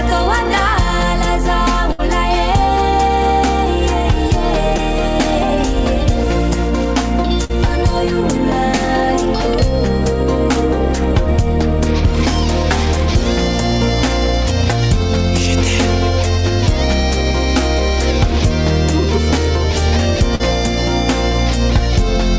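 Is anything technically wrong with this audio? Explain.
Yes. There are two kinds of packet loss, heard through a call path whose audio stops at 8 kHz, which fits a wideband G.722 codec.

Bursts of packet loss occur at 1.92 to 2.01 s and 7.44 to 7.51 s. Several packets in a row were lost or arrived too late. The receiver extended the last sound for 60 ms, then 50 ms, fading it down. Then the audio jumps ahead, skipping about 60 ms and 40 ms.

Short concealed packet loss occurs at 4.76 to 4.80 s and 20.35 to 20.41 s. Each time the decoder lacked a packet. It patched the hole by continuing the previous sound for 19 ms and 41 ms, then blended back. Each patch is a brief smear or wobble.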